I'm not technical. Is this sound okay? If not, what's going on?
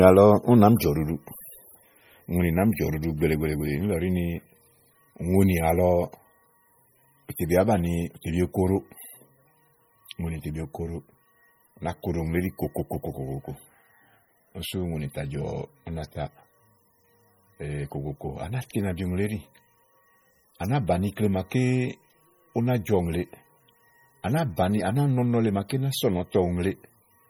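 No. The speech sounds watery and swirly from start to finish. The s sounds come out with a metallic, chirpy edge. The starts of sounds are smeared rather than crisp. This is likely MP3 compression, squeezed hard to save space. The encoder keeps only the parts of the sound it judges most important. Quieter details flicker on and off many times a second. That flickering is the swirly, underwater quality you hear throughout.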